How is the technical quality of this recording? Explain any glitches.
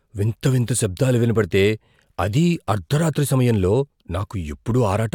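No glitches or technical faults are audible anywhere in the recording.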